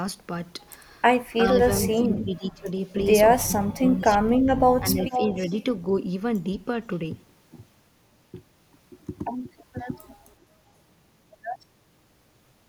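A speech recording with two echo-canceller problems. An echo canceller that likely could not separate this talker from loudspeaker echo while both sides spoke turned everything down, and this speech suppressed in double talk appears three times: 1.49 to 2.70 s, where about a second of speech sinks by roughly 20 dB; 3.45 to 4.29 s, the deepest, with cuts near 30 dB over roughly 0.7 s; and 4.79 to 5.37 s, a milder dip of about 10 dB. Overlapping that last dip, from 5.01 to 5.63 s, the far end's canceller likely failed to remove what its microphone picked up from its loudspeaker, and this echo leak sent back a copy of the speech delayed by 466 ms. The copy sits only about 5 dB below the direct speech.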